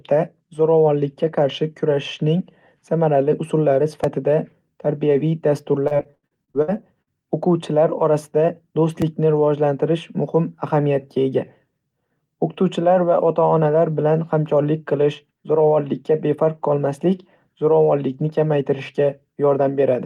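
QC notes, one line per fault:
4.04 s and 9.02 s, dropped buffer (overrun): there's a tiny jump forward in the speech at each point, the first right after "qarshi kurashning samarali usullari", the second just before "rivojlantirish muhim ahamiyatga ega". Only a few milliseconds go missing, with no silence, just a hard splice. That's likely the software not reading the input in time, so the hardware wrote over a chunk and the two ends got butted together.
5.87–7.09 s, repeated packet loss (robotic sound): this stretch goes choppy, with about ten short dropouts across roughly 1.2 s, the longest about 78 ms. Each hole gets patched by stretching out the sound just before it, so about 31% of the span is filler, roughly 370 ms of it, standing in for about 380 ms that never arrived. That constant patching is what gives it the robotic edge.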